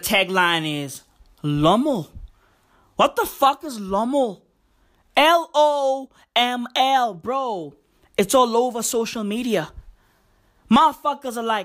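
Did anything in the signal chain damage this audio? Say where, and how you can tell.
No, nothing damaged it.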